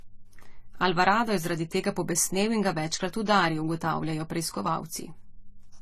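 From start to finish, the speech carries transcoding between lossy codecs, likely Vorbis re-encoded as low-bitrate AAC-LC, so both codecs' artefacts overlap. A spectrogram shows nothing above 14 kHz, with blotchy, flickering patches in the upper bands.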